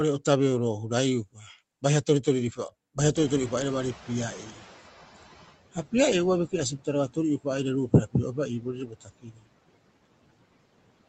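At 1.33 to 1.46 s, just before "baiha toritoriri", the noise suppressor cut speech, mistaking part of the speech for background and pulling it down by about 17 dB for roughly 150 ms. The sound goes faint and swallowed rather than breaking off. Unlike a packet-loss dropout, there is no hard gap or glitch, and the quiet background sinks along with it.

From 3.15 to 5.51 s the noise suppressor is catching up. The room noise jumps by about 25 dB at around 3 s, and the suppressor's noise estimate takes about 2.4 s to follow. At first the louder noise comes through with less reduction, then it slides down by about 14 dB as the estimate adapts. This gradual sinking is what separates it from a gate, which would snap the noise on and off.

Inside that window, at 4.51 to 4.6 s, speech is cut again more lightly, about 8 dB for roughly 100 ms. The suppressor briefly treats a quiet moment of speech as noise.

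The longest speech cut runs from 8.61 to 9.47 s. For roughly half a second the speech is pushed down by up to about 19 dB and sounds faint and swallowed. It dips and recovers smoothly with no click at either edge, which sets it apart from a codec loss or a clipped edit.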